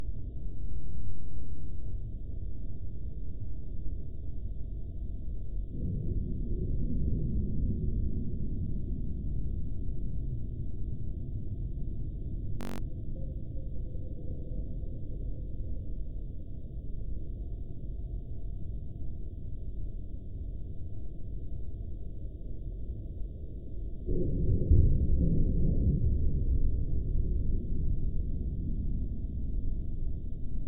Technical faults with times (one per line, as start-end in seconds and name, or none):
0.00-2.00 adaptive stream starting at a low bitrate
12.61-12.78 system hang loop